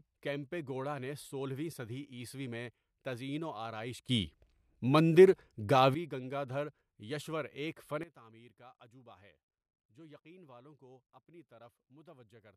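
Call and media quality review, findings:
Sudden gain jump, 4.09–5.94 s: speech and background noise leap up about 13 dB together, then drop back just before "گنگادھریشور ایک". Likely an unramped digital gain step in the capture or mixing stage.

Sudden gain jump, 8.03 s to end: level and noise floor fall together by about 16 dB just after "گنگادھریشور ایک". Likely a gain setting applied between one sample and the next with no ramp.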